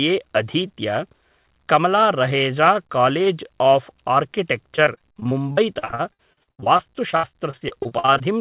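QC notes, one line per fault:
4.76–8.22 s, repeated packet loss (robotic sound): the speech turns choppy, with dozens of short holes, the longest about 90 ms, roughly 29% of the stretch. Lost packets keep getting patched by extending the previous sound, over a narrowband call link capped at 4 kHz.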